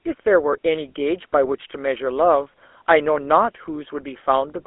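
Throughout the speech, a GSM full-rate codec rebuilds each voice from a vocal-tract model driven by sparse, regularly spaced pulses, at a rate consistent with 13 kbps, inside a 300 Hz to 3.4 kHz line band. The result is a plainly audible buzzy, gravelly roughness with dulled highs.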